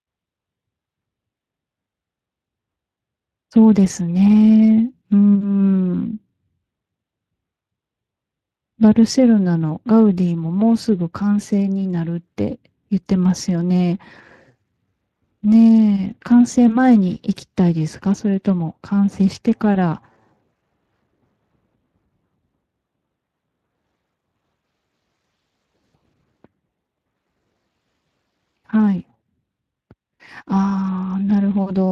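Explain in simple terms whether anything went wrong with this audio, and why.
Speex codec damage runs through the whole recording, from the first second to the last. Speex is an older speech compressor used in internet calls and game chat. It stores a rough model of the voice plus a small amount of detail about the buzz and breath that drive it. Here that detail is noticeably thin, so the speech comes across grainy and hoarse.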